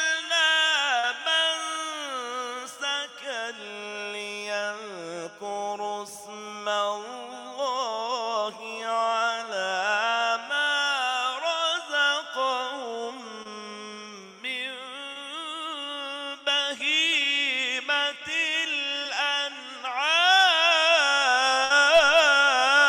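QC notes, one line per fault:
0.99–1.05 s, 13.43–13.47 s, 15.13–15.17 s and 19.03–19.07 s: short concealed packet loss. Each time a sliver of audio didn't reach the decoder in time: 40 ms at 0.99 s and 20 ms at the other three. The receiver patched each hole by carrying on the sound just before it, then blended back into the real signal. So instead of a clean dropout you get a quick smear or wobble.
21.65–21.72 s: burst of packet loss. About 60 ms went missing in one go, which is too much to hide smoothly. The receiver kept stretching the last bit of sound while turning it down, so you hear a brief held, fading tail. When playback picks up again, the stretch in between is simply gone, giving a small jump forward.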